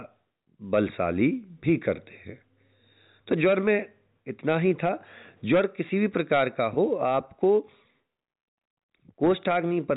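Nothing stood out on listening to this speech clip.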